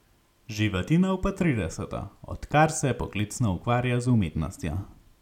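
A short speech recording with no technical faults to report. Nothing in it calls for a time, a value or a cause.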